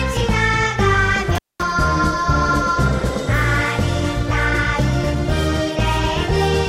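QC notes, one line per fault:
1.35–1.63 s, intermittent contact. The sound drops out abruptly for about 215 ms, with a crackle as it cuts out and another as it returns. While the line is open, a faint hiss remains. This is what a loose cable or plug does when it briefly loses connection. The signal path breaks and the scraping of the contact points makes the crackle at each edge. The gap ends when the connection is re-made.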